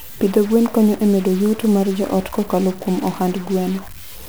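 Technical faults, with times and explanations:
Throughout, stuck bit: harsh, buzzy distortion over the speech and noise in the pauses, likely one data bit held fixed, adding errors of about -30 dBFS.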